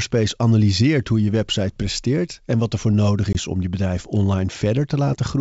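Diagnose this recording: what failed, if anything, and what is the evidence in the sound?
Packet loss on an ADPCM call, 3.33–3.36 s: a hard-edged 20 ms hole after "wat er voor nodig", then slightly distorted speech while the G.722 decoder's predictor resynchronises.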